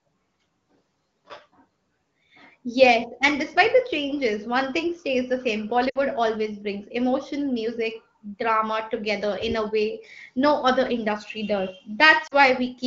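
At 5.89 to 5.98 s and again at 12.27 to 12.34 s the speech suffers lost AMR speech frames. Radio errors corrupted short runs of frames, and the decoder papered over each gap by repeating the last good pitch and vocal tract settings at falling gain. Each spot sounds like a brief smeared warble that quickly fades before the speech returns. A spectrogram shows stretched, frozen harmonics decaying into a faint gap, and the waveform shows a shrinking envelope. The wideband codec around these spots sounds clear, consistent with one of its higher-rate modes.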